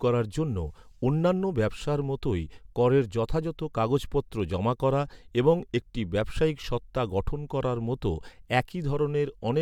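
No audible technical faults anywhere in the speech; nothing to report.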